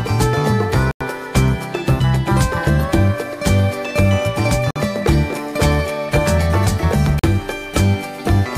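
The audio cuts to dead silence three times: at 0.91 s for about 94 ms, at 4.71 s for 50 ms, and at 7.19 s for 43 ms. Each gap is a Bluetooth stall, likely caused by radio interference delaying packets until the headphones' buffer emptied and playback halted for the retransmissions. These are clean silent holes, not the smeared or repeated fragments that packet-loss concealment leaves, and not single clicks from a sample-level glitch.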